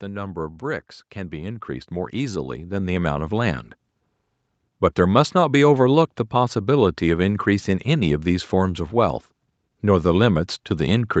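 Speech, with one automatic gain rising event: from 1.13 s to 3.7 s the level swells by about 11 dB, voice and background lifting together as the AGC decides the input is too quiet and gradually ramps its gain up.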